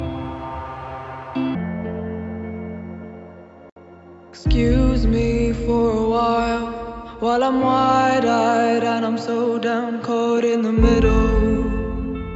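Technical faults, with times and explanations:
0.00 to 1.55 s, wrong sample rate: the opening runs 1.5 times too fast and sits about 7 semitones too high. Speed and pitch shift together because the samples are replayed without conversion, which fits 16 kHz material played at 24 kHz. On a spectrogram, every harmonic and resonance band sits 1.5 times higher than after 1.55 s, with the content ceiling lifted from 8 kHz to 12 kHz. The waveform looks squeezed in time, with cycles and envelopes packed closer together.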